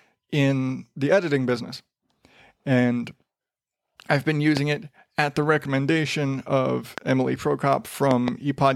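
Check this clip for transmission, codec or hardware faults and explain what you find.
The clip has one kind of hardware fault, a loud pop, occurring three times. A sudden voltage step or pulse, likely from a plug, switch, static discharge or driver glitch, entered the signal chain and was shaped by the circuits that followed it. This puts a sharp pop on top of the speech, roughly 15 dB above it, at 4.57 to 4.59 s and 6.98 to 7.00 s, and a double pop between 8.11 and 8.30 s. The speech continues underneath each pop.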